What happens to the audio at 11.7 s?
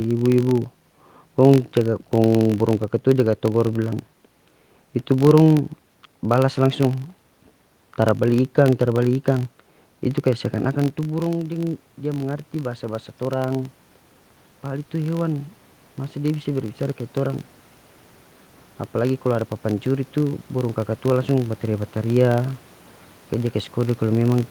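At 11.7 s the automatic gain is rising. Between 10.24 and 13.77 s the level control slowly adds about 5 dB after the input drops by about 12 dB as the talker moves away around 10.5 s. Speech and room noise swell together, which shows on a waveform as a gradually widening envelope and on a spectrogram as a slow brightening across all frequencies.

The filter also restarts on every block here, as it does throughout the clip. Each block starts from silence, so a small transient marks its start, producing a 46.9 Hz buzz that fits a 1024-sample buffer and follows the speech level. A spectrogram shows evenly spaced thin vertical lines, and a zoomed waveform shows a tick at every block edge.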